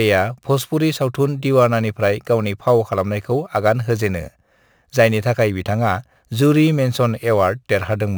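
Speech carrying imaging from sample-and-hold upsampling throughout. Each sample of an original rate near 22 kHz was simply repeated up to 48 kHz, so a mirrored copy of the speech spectrum sits between about 11 kHz and 22 kHz, roughly 25 dB down. It is heard as a metallic fizz tracking the voice. A spectrogram shows that inverted copy, and a zoomed waveform shows staircase steps.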